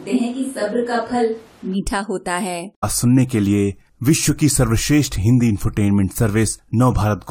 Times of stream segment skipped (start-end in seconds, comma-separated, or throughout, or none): 2.82